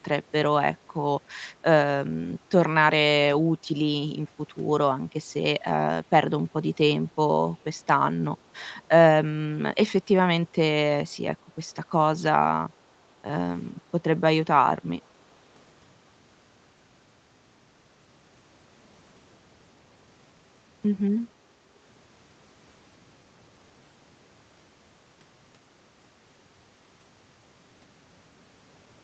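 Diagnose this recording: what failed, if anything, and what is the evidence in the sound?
Echo leak at the call-processing stage: two faint scraps of delayed speech, at 7.07 to 7.11 s and 7.57 to 7.64 s, trail the original by 477 ms at roughly 40 dB below it. The likely cause is a far-end echo canceller leaving loudspeaker pickup unsubtracted.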